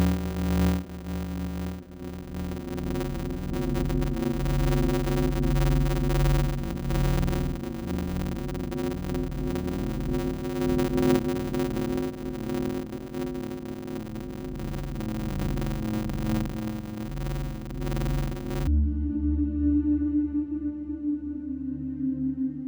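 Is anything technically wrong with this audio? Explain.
Yes. From 0.0 to 18.67 s, a 100 Hz buzz runs through audio slowed to 0.533 speed with its timbre intact. This is a padded block size mismatch: short blocks, roughly 256 samples, are zero-filled to a larger read size.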